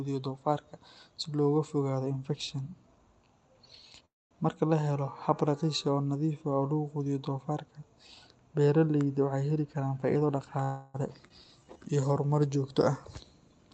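Speech over a call path, with the top end cut off around 8 kHz, which fits Opus at roughly 32 kbps. There's a call audio freeze at 4.05 to 4.33 s, likely from held-up packets draining the jitter buffer: about 0.25 s of filler that fades quickly to silence, then the sound picks up where it stopped. A jitter buffer speed-up runs from 9.56 to 10.59 s, with tiny pitch-period chunks trimmed to play at about 114% speed, same pitch, roughly 150 ms shaved off, so it sounds hurried. Right after that, a second freeze at 10.63 to 10.96 s stretches the last sound into a fading buzz for about 0.31 s, with nothing actually lost. A skip ahead at 11.28 s drops roughly 100 ms and joins the two sides almost directly, so the audio lurches forward. Then a jitter buffer slow-down from 11.46 to 12.09 s, just before "horumar joogto", repeats pitch periods to run at about 88% speed, adding 84 ms and drawing the sound out without changing pitch.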